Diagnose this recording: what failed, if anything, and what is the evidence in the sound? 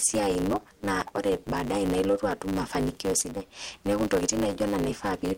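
A block size mismatch (truncated) at the driver or buffer stage runs through the whole recording. A steady 100 Hz buzz sits under the speech, and the speech moves about 1.16 times too fast while its pitch stays near normal. One stage writes blocks, which fits a 512-sample block, and the next reads fewer samples. Each block's tail is dropped, so every block boundary clicks. A sample-rate mismatch would raise pitch along with speed. A padded mismatch would slow the audio and insert gaps.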